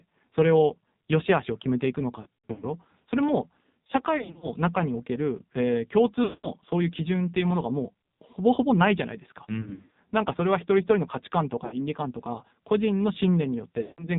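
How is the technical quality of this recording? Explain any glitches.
The technical quality is poor, with heavy mobile-codec damage throughout and six bursts of dropouts.

The AMR narrowband mobile codec runs at a very low rate, consistent with roughly the 5.9 kbps mode. The 8 kHz sampling removes everything above 4 kHz, so the speech sounds muffled and band-limited, and the sparse pulse model makes it buzzy and synthetic.

Lost AMR speech frames occur at 2.22–2.65 s, 4.18–4.48 s, 6.24–6.50 s, 9.62–9.96 s, 11.66–11.85 s and 13.82–14.09 s. Radio errors corrupted frames, and the decoder reused the last good pitch and vocal-tract settings at falling gain. Each burst sounds like a stretched, warbling smear, with speech returning rough. The worst burst is around 2.2 s, where gaps of up to 100 ms are scattered over 400 ms.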